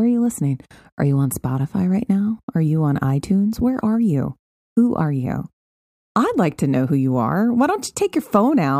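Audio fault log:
No faults found in this speech recording; the background falls to silence in the pauses and returns in time for each following phrase, with only very quiet sound lost.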